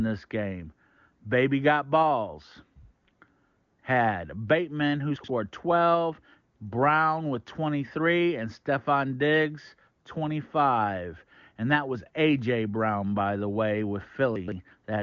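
Chunks out of order occur at 5.16 to 5.28 s and again at 14.36 to 14.52 s. A 40 ms block of speech plays two, then three, blocks after its proper place. Nothing is missing, but the displaced piece creates a brief jumbled stutter.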